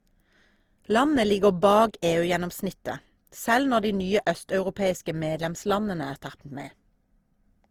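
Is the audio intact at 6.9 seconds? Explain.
No. At 6.9 seconds the speech carries generation loss, present throughout the clip: a swirly, hollow, smeared quality with blurred attacks, which fits repeated lossy coding, likely around four Opus passes at about 48 kbit/s, each re-quantising on a shifted frame grid so that noise accumulates.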